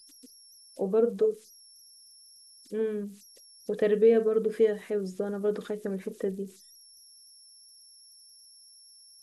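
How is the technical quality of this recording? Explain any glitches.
The quality is compromised by converter idle tones running throughout. An undithered delta-sigma converter settles into repeating bit patterns on small inputs. That produces a whistle around 5 kHz, about 29 dB below the speech, audible in pauses.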